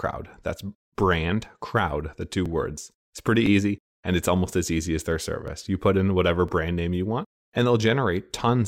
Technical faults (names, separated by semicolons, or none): overlapping chunks